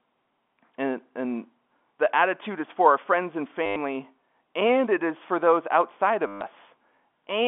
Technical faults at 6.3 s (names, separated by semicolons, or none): packet loss with last packet repeated